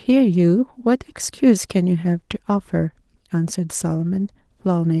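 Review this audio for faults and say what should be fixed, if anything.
Nothing stood out on listening to this speech clip, so there is nothing here to fix.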